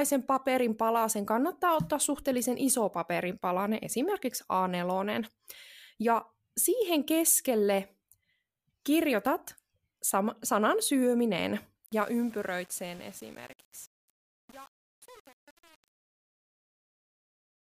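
From 11.86 s to the end, the fade-out picks up truncation distortion on a fade. The gain stage seems to keep only 7 bits with no dither, so as the speech drops, the waveform collapses into coarse steps, and the tail sounds gritty the whole way down.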